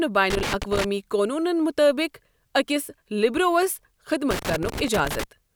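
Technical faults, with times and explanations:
0.30 to 0.85 s and 4.31 to 5.24 s, loose connector crackle: twice the speech is broken by an irregular scratching burst, the first about half a second long and the second nearly a full second. A worn or dirty contact somewhere in the cable path is making and losing connection as it shifts, so the signal is rapidly chopped on and off, and any DC sitting on the line turns each break into a pop.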